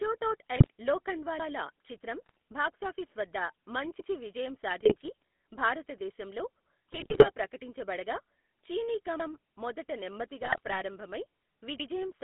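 Throughout, the speech carries the buzzy, gravelly roughness of the GSM full-rate codec, its coarse pulse excitation plainly audible, with the band held to roughly 200 Hz to 3.6 kHz. GSM bit errors corrupting the decoder's filter, pitch and gain values break the speech into squawks, pops and gargling at 0.56–0.68 s, 2.26–2.37 s, 4.80–5.10 s, 6.89–7.29 s and 10.41–10.80 s. Overlapping chunks replay a 100 ms piece at each join, heard as a brief stutter or click at 1.40, 4.00, 9.20 and 11.80 s.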